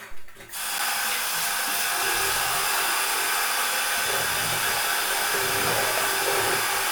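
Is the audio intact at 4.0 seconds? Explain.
Yes, at 4.0 seconds the sound plays through cleanly, with no dropout, click, distortion or other fault at that moment.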